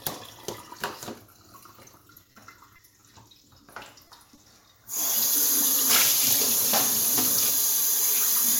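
Repeated packet loss (robotic sound) runs from 1.85 to 2.41 s. Over about half a second, four gaps open in the stream, the longest 30 ms. The receiver bridges each one by stretching the sound it had just played, which adds up to 70 ms of filled audio, or about 13% of the stretch. Because the patches come close together, the sound turns choppy, with small pieces dropping out.

Short concealed packet loss follows at 2.76 to 2.80 s and again at 3.00 to 3.04 s. Each time, a brief slice of the stream arrives too late to decode. The decoder covers it with 20 ms of sound extrapolated from what came just before, then blends back into the real signal. Each event is heard as a brief smear or wobble.

A second run of repeated packet loss covers 3.74 to 4.45 s. It has four more gaps, none longer than 20 ms, with 70 ms filled in total, or about 10% of the span. The repeated stitching gives the same choppy sound as the earlier run, spread over a slightly longer stretch.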